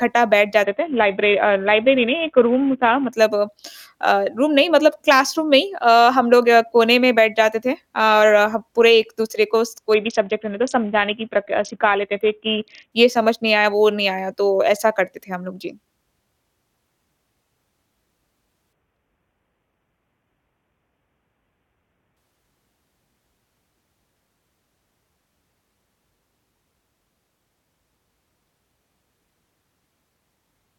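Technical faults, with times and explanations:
0.64–3.13 s, 9.94–12.92 s and 18.73–22.17 s: Bluetooth SBC bit pool drop. The speech turns dull and gritty, consistent with the bit pool falling from 28 to about 5 (near 54 kbps), starving the upper sub-bands. Unlike a dropout, sound never stops, and full treble returns each time.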